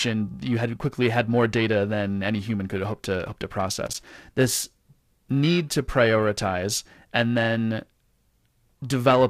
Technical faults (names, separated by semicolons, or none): periodic clock jitter; loose connector crackle